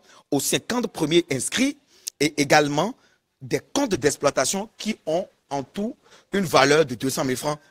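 At 3.94 s a call bitrate drop runs to the end: coarse, muffled sound with dulled highs, fitting a fall from about 64 to 14 kbps.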